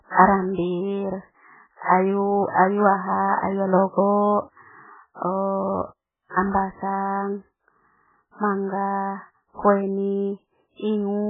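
Throughout the speech, nothing is heard above 3.7 kHz, and heavy MP3 compression is the likely cause: the sound turns watery and swirly as weak frequency lines drop in and out between frames, consonants smear, and the damage points to a starved bitrate near 8 kbps. A plain low-pass filter would dull the treble without that shifting, metallic warble.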